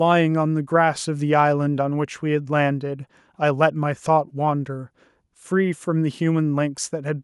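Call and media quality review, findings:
No audible defects found in the speech recording.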